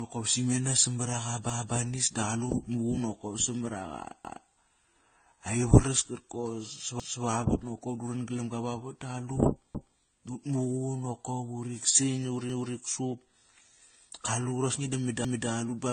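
Speech that has been through more than one lossy codec, with nothing above 9 kHz and a mix of artefacts from different coders stacked on top of each other. This is likely transcoding between lossy codecs: a low-bitrate HE-AAC-style stage followed by AAC and then WMA, with the lowest cut-off surviving the chain. Separately, overlapping chunks cause a 250 ms stretch to play twice, heard as a stutter at 1.50, 4.25, 7.00, 9.75, 12.50 and 15.25 s. This pattern fits 2.5 s chunks, each starting 250 ms before the previous one ended.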